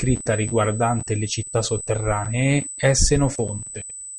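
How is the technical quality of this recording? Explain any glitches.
The technical quality is poor because of one fault. A USB whine runs through the whole speech clip as a steady 8 kHz tone, roughly 10 dB below the speech. The bus draws current in 125-microsecond microframes, and that ripple leaks through power or ground. Its fixed pitch at 8 kHz sets it apart from low 50 or 60 Hz mains hum.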